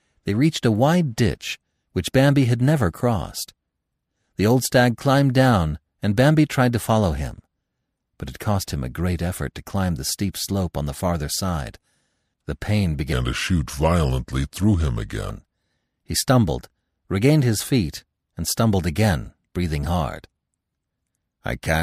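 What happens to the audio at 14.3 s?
At 14.3 s the speech sits inside a stretch from 13.13 to 15.30 s where it turns deep and sluggish, dropped by about four semitones and dragging, with pitch and pace falling together. This is a section at the wrong speed: that span plays at 0.808 times its recorded rate. The likely cause is that the segment was clocked at a lower rate than it was captured at, so every sound is stretched in time and lowered in pitch at once.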